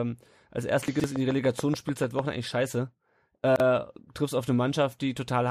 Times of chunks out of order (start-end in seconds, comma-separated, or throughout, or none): 0.88-1.04, 3.44-3.60